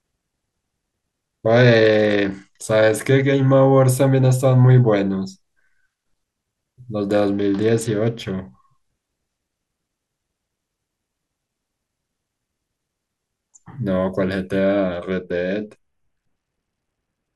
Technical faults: Bluetooth SBC bit pool drop

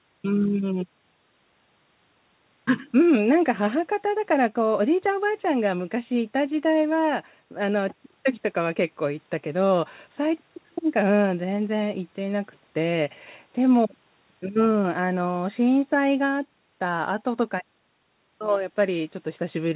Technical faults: none

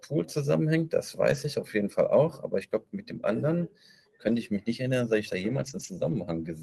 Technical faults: lost packet rebuilt from error correction

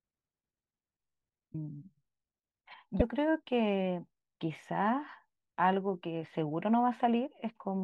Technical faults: broken MP3 bit reservoir

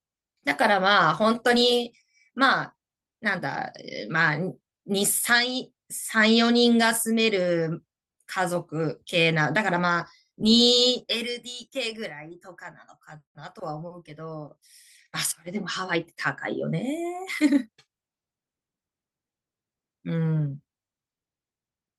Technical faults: none

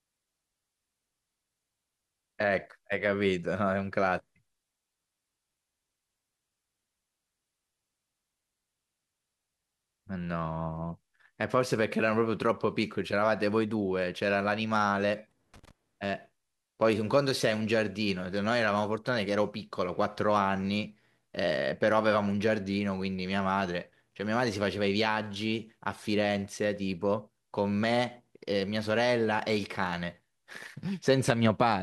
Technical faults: loose connector crackle

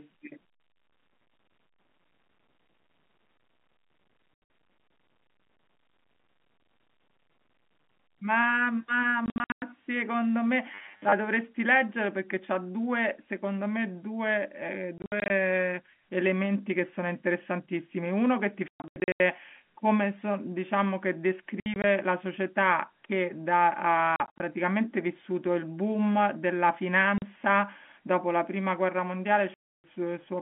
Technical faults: packet loss filled with silence; robotic sound from repeated short buffers

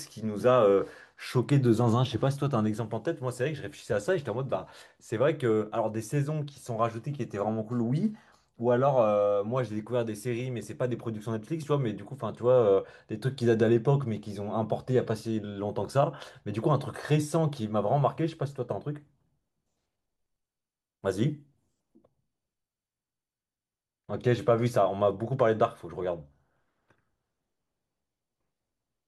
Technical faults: none

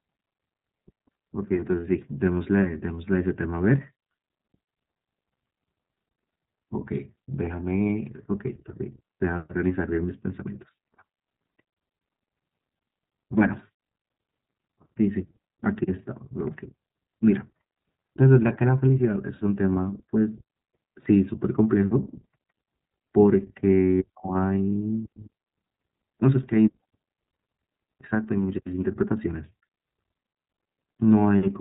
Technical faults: iLBC codec

